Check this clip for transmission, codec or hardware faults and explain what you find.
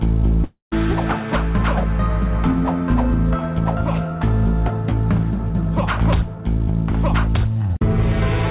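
One transmission fault stands out: a long network dropout from 0.44 to 0.74 s. It is heard through a call path whose bandwidth stops at 4 kHz, which fits G.711 mu-law at 64 kbps. The gap was likely caused by lost packets. With nothing arriving, the receiver stretched the last sound into a buzzy or hissy tail for about 0.28 s, fading into roughly 0.13 s of silence before the audio resumed with about 0.28 s of material gone. On a waveform this shows as a shrinking envelope collapsing to a flat line. On a spectrogram it appears as smeared, repeating bands fading into a blank column.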